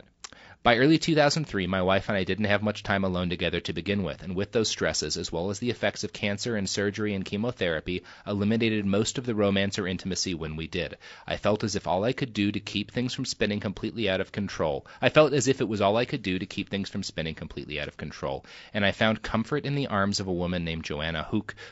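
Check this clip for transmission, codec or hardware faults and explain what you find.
One codec fault runs through the whole speech clip: low-delay AAC compression, plainly audible from start to finish. The voice sounds rough and grainy, with a hiss filling the gaps between pitch harmonics and a thin, synthetic-sounding top band. The likely cause is AAC-ELD at a bitrate that sounds close to 32 kbps. Its very short frames blur the harmonic structure and spend bits inefficiently. The steady, even texture tells it apart from packet loss, which produces dropouts and smeared gaps rather than constant grain.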